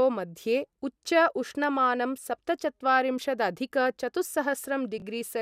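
A speech recording with a brief garbled, jumbled moment between 4.98 and 5.02 s. It is chunks out of order: a 20 ms chunk arrived late and plays one chunk after its proper place, leaving three hard joins.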